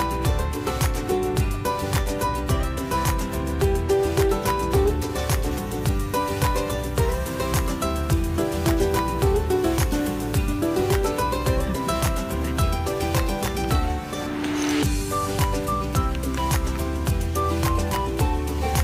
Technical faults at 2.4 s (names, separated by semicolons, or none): none